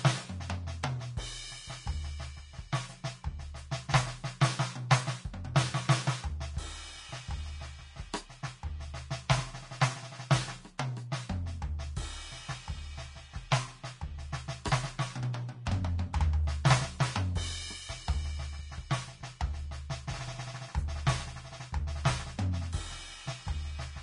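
From start to end the music sounds hissy and grainy, with nothing above 10.6 kHz, likely Vorbis compression at a low bitrate, somewhere near 33 kbps.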